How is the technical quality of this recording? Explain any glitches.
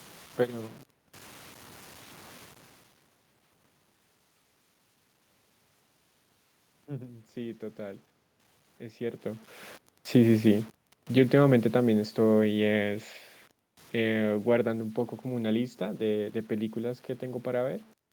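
The recording has grainy distortion throughout and three gradual level shifts from automatic gain control.

Low bit depth without dither: For the full length, quiet passages sound gritty and the grain shifts with the speech, sitting roughly 30 dB below it. The likely cause is samples truncated to few levels without dither, which fits 8-bit audio, so the rounding error tracks the signal.

Automatic gain rising: From 6.86 to 8.08 s, speech and room noise swell together by about 3 dB. The gain control judged the input too quiet and eased its gain upward, so the background climbs along with the speech rather than staying put.

Automatic gain falling: From 10.0 to 13.0 s, the sound starts loud and then sinks about 10 dB, with the background dropping in step. A second, gentler dip of about 3 dB follows from 13.95 to 16.78 s. Each time the control judged the input too hot and pulled its gain down gradually. 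The talker's shifts in distance near 2.5 s and 9.0 s also change the level, but those come from movement at the microphone.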